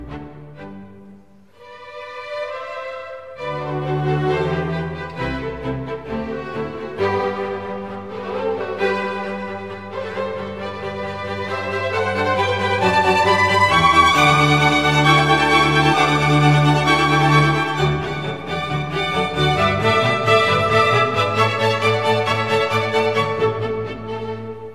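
No technical faults can be heard anywhere in the recording. Nothing in the audio points to a dropout, glitch or other failure in the chain that carried it.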